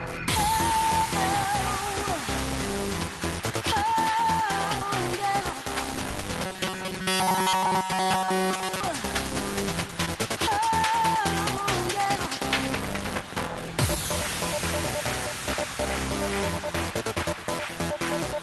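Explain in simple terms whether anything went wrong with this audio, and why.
From 6.46 to 8.80 s, the sound turns into a rigid metallic buzz at 188 Hz. This is robotic sound from repeated short buffers, likely from tiny repeated chunks of audio.

At 10.05 to 10.09 s there is a brief smear. This is short concealed packet loss: 20 ms never arrived, and 15 ms was patched over.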